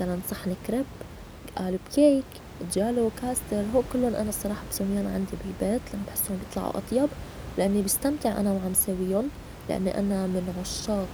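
There are no technical faults to describe in time order anywhere in this speech clip.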